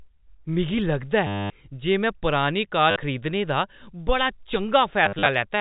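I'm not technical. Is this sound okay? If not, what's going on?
No. Parts of the speech got lost along the way, and the receiver filled each gap by replaying the last bit it had. This is packet loss with last packet repeated, and it sounds like a short robotic stutter. It happens from 1.27 to 1.5 s, right after "मिगी लगदा", briefly at 2.91 to 2.96 s, and in scattered bits between 5.06 and 5.26 s.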